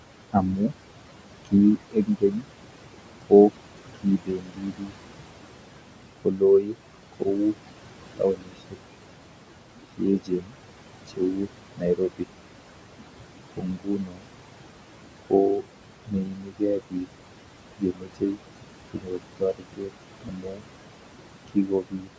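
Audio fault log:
Throughout, noise suppressor artifacts: the suppressor is pulling down whatever bands it reads as steady noise, frame by frame, by about 22 dB. So the room noise, sitting about 12 dB under the talker, drops away in the gaps and comes back up under the speech. The voice has a top end that stops around 8 kHz from the call mic path.
0.32–4.94 s, 6.18–8.77 s, 9.97–12.28 s, 13.56–14.29 s and 15.22–22.1 s, speech cut by the noise suppressor: in each stretch the suppressor mistakes quieter bits of speech for noise and turns them down with the background, by up to about 22 dB. Soft consonants and word tails sound swallowed or faint. It adds up to roughly a second and a half in each of the first three spans, well under a second in the fourth, and around three seconds in the last.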